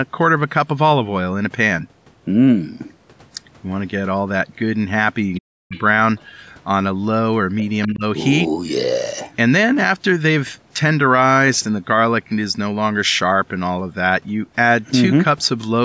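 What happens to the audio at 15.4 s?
Nothing goes wrong at 15.4 s; the speech carries on intact through that moment, with only the usual call microphone processing, whose high-pass filter trims the deepest bass and which passes nothing above about 8 kHz.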